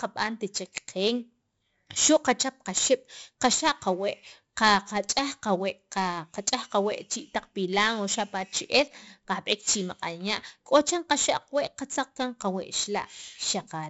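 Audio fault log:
Throughout, 4-bit ADPCM compression: every loud stretch of the speech carries a gritty hiss that swells and fades with the level. Each sample is coded as a coarse 4-bit step from a predicted value, so the leftover error becomes noise that tracks the signal. Consonant attacks crackle where the adaptive step lags behind sudden jumps. Nothing sounds above 7.7 kHz, and the heavy grain fits a stream of about 64 kbps.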